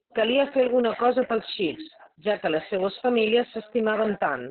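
From start to finish the speech sounds muffled, hoarse and faintly robotic, with nothing audible above about 4.1 kHz, so it has the boxed-in quality of an old telephone line. This is heavy Opus voice compression. The narrowband cutoff and coarse, buzzy texture point to the SILK linear-prediction coder working at a very low rate, around 6 kbps with long frames. At that rate the coder trims the band to 4 kHz and models the excitation only roughly, leaving that grainy rasp.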